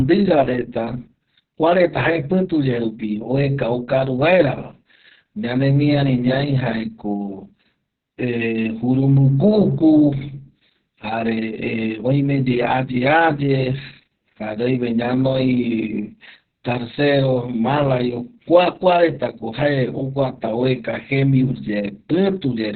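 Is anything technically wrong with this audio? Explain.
Yes. Opus voice compression throughout: the SILK coder has narrowed the band, leaving nothing above 4.3 kHz and a coarse excitation, which fits a very low bitrate near 6 kbps. The speech sounds heavily muffled, hoarse and slightly robotic.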